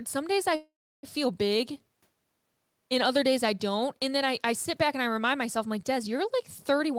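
A call audio freeze runs from 0.55 to 1.05 s in this speech recording. The sound stops moving forward, the receiver stretches the last moment into a fading buzz or hiss, and then it drops to about 310 ms of silence before the talk resumes exactly where it left off. Nothing is lost; roughly half a second of delay has been inserted. The likely cause is packets held up in transit until the jitter buffer drained empty. A jitter buffer speed-up follows from 6.78 to 6.97 s, where the final stretch plays at 140% speed with unchanged pitch and sounds hurried. The receiver, holding more audio than its target, shaved out about 70 ms in a run of tiny pitch-period-sized cuts to catch up on latency.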